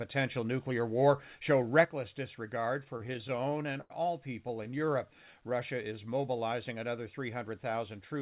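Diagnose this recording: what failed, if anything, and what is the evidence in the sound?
One stereo channel drops out at 1.85 s, right after "nuclear war show", and stays gone to the end. Once the channels are summed to mono, the overall level falls abruptly by about 6 dB and stays there. The cause is likely a lost channel at the capture or analogue wiring stage. On the waveform, the envelope steps down at that instant and never recovers. On the spectrogram, every band darkens evenly at once, with no change in spectral shape.

Repeated stalls (stutter) come from the network and jitter buffer. From 2.84 to 3.92 s there are 13 gaps, the longest 88 ms, with about 220 ms bridged, roughly a fifth of that stretch. From 4.48 to 4.88 s there are six shorter gaps of at most 16 ms, totalling 56 ms. Packets arrived late, the buffer ran dry, and the receiver extended the last sound each time. Nothing is lost, but the speech drags. 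The spectrogram shows short frozen, smeared slices, and the longer fill fades in amplitude on the waveform.

A jitter buffer slow-down runs from 5.06 to 6.34 s. The receiver repeated single pitch periods to rebuild its reserve, adding 135 ms and playing at about 90% speed. Pitch is unchanged, so the sound is simply drawn out. On the spectrogram, harmonics keep their spacing but stretch horizontally. The waveform shows runs of near-identical periodic cycles. All of this sits inside a G.711 A-law call band with nothing above 4 kHz.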